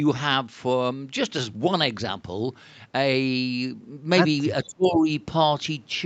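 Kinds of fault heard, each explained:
Speech suppressed in double talk: Between 4.67 and 5.08 s the speech dips deeply, around 25 dB. An echo canceller likely turned it down while both sides talked.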